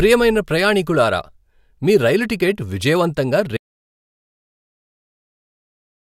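Audio dropout to silence at 3.57 s in this speech clip, just after "మీ రైలు టికెట్ విజయవంతంగా", lasting to the end: the signal cuts to silence with no room tone, likely from a lost input or link.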